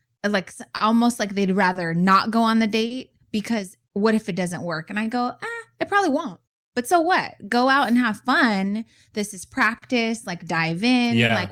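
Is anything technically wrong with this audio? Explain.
Yes. The recording carries clock drift between sender and receiver. The sender's audio clock runs roughly 3 percent slower than the receiver's, so the receiver's jitter buffer keeps draining faster than it is refilled. The receiver then has to pad and stretch what it has to stay in step. In this speech clip, that shows up as the recurring small stalls and the drawn-out stretch described below, spread unevenly across the recording.

There are five short stalls from a late packet, at 0.77 to 0.82 s (just before "like they'd"), 1.72 to 1.77 s (between "like they'd" and "not go on the"), 2.87 to 2.92 s (just after "not go on the"), 9.78 to 9.84 s, and 11.26 to 11.31 s. Each time, a packet wasn't there when due and the buffer ran empty. The receiver held the last sound for 30 ms, or 40 ms at 9.78 s, then resumed where it left off. No audio is lost, but a sound hangs on too long at each point, possibly with a slight buzz or dip.

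From 3.91 to 10.89 s there are repeated timing corrections. The receiver repeatedly inserts short repeated pieces to keep pace with the slower sender, all in the same direction but at uneven spacing. Playback runs at 98 percent speed through this stretch, adding around 150 ms in total. Each edit is small, so the result is heard as slight hiccups or a tempo that drags unevenly, rather than as distinct glitches.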